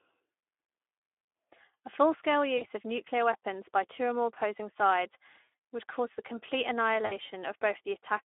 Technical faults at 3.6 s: Speex codec

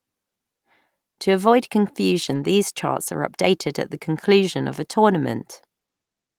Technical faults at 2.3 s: lost packet rebuilt from error correction

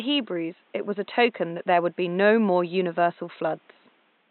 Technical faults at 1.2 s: none

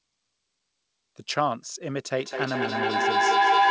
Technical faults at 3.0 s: feedback howl

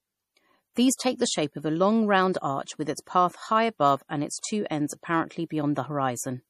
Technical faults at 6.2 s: MP3 compression

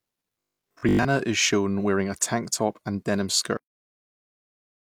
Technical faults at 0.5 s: robotic sound from repeated short buffers

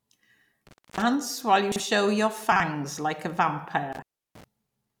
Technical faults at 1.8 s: chunks out of order

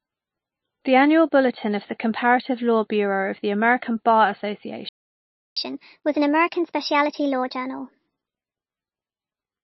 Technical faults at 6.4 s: MP3 compression; catch-up at higher speed

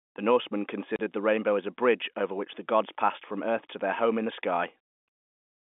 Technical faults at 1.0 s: packet loss filled with silence

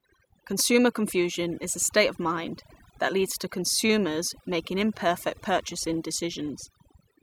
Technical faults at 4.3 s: overdone noise removal

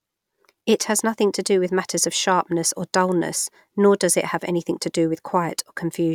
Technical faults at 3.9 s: none

